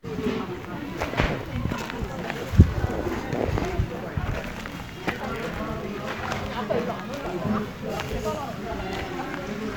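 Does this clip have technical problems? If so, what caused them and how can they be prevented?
Yes. From 4.32 to 5.57 s there is buffer tearing. The writer and reader of the ring buffer have slipped, splicing a small slice of audio about 70 ms old into each period. This produces a 25 Hz rattle. A spectrogram shows vertical striping every 40 ms, and the waveform shows steps at each join. Keeping the write pointer safely ahead of the hardware read pointer prevents it.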